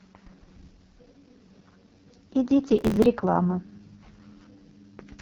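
The speech was carried over the AMR wideband (HD Voice) codec at its lowest setting, and the heavy coding damage fits the 6.6 kbit/s mode. At that rate the vocal tract model gets too few pulses to rebuild each sound faithfully, so the voice turns rough and raspy throughout. The shaped noise that stands in for the top band stops short, leaving nothing above 6.8 kHz. From 2.79 to 3.06 s there is processor overload crackle. The processor fell behind and missed around twenty deadlines over that stretch, with very short buffers of a millisecond or two. Each missed buffer was skipped outright, cutting out a sliver of sound with hard edges, and together they make a gritty burst of crackle over the speech that stops when the load passes.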